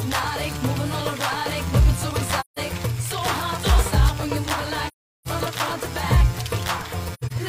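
Three soft-edged holes at 2.40–2.59 s, 4.88–5.28 s and 7.14–7.32 s come from AAC frame loss with muting: zeroed frames fade out and back through overlapping windows. The last gap is broken up, its longest run about 100 ms.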